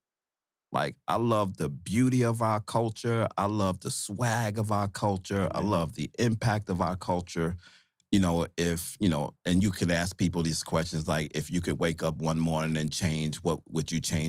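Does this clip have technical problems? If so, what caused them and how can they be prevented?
No, there are no technical problems to point to in this speech recording. Nothing here calls for a fix or any change to how it was captured.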